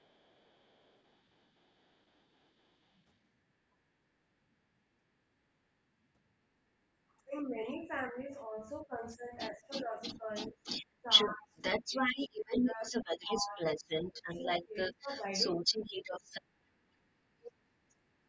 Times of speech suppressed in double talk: 7.20-10.62, 11.02-11.95, 12.29-13.58, 14.12-15.08, 16.74-16.78

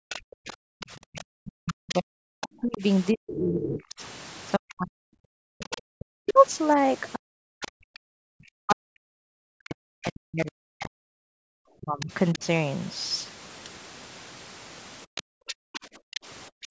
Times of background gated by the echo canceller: 15.14-16.71

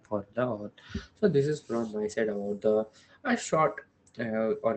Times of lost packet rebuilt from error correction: 0.55-0.57

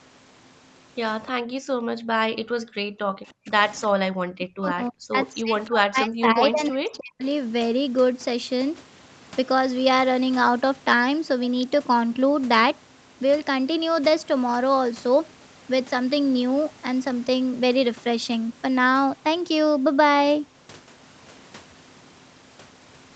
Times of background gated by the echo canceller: 1.32-2.01, 2.60-3.16

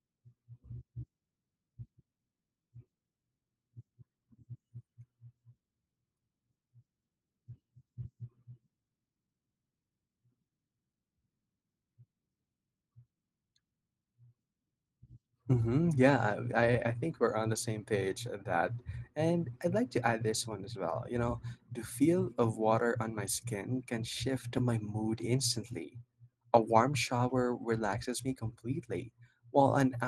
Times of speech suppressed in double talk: none

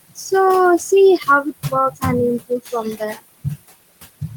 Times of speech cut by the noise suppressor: 1.91-2.03

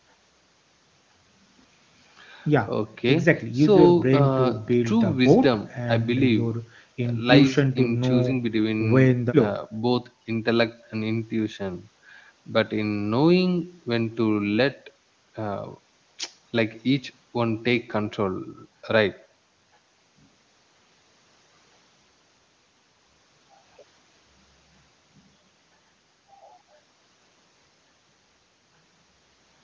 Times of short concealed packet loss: none

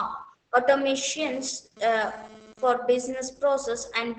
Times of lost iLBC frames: none

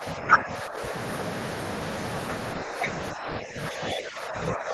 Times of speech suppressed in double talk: 0.00-0.93, 3.13-4.74

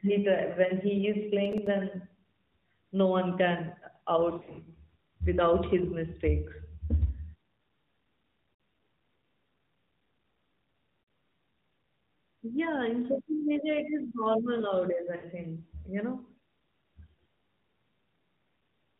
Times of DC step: none

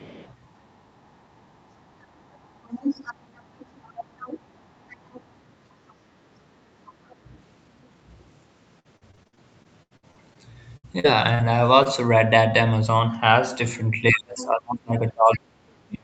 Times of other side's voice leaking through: 0.00-0.33, 1.05-4.62, 4.88-5.23, 7.09-7.16, 14.38-14.45, 15.33-15.39

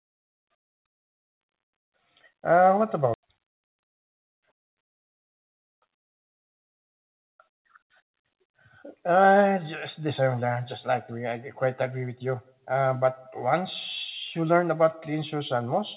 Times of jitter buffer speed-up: 3.17-7.24

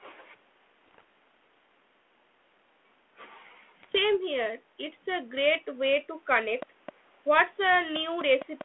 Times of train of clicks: 6.62-8.62

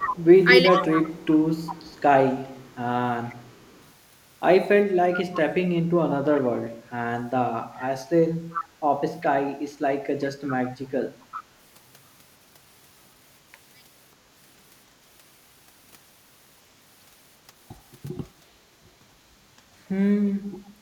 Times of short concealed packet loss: none

